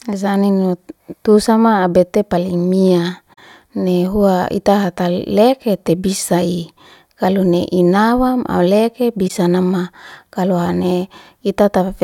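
Concealed damage hits the speech from 3.33 to 3.40 s and again from 9.28 to 9.31 s: corrupt frame concealed, where the decoder caught damaged AAC frames and papered over them with muted or scrambled replacement audio.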